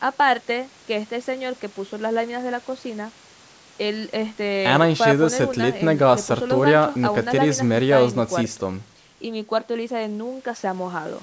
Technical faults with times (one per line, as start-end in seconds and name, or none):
none